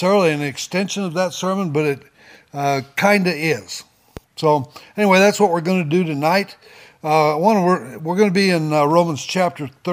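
At 4.17–4.20 s, a loud pop, likely a stray voltage pulse, peaks a few dB over the sound: a broadband vertical stripe and waveform spike.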